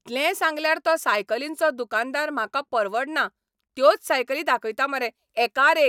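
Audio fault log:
No faults heard in this speech clip.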